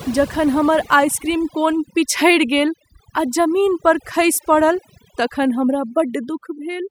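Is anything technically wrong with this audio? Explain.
Yes. Throughout the speech clip there is overdone noise removal: a noise reducer set too aggressively switches off individual frequency bands whenever they sit near its noise estimate, taking quiet parts of the voice too. The background drops and breaks up into twinkling specks.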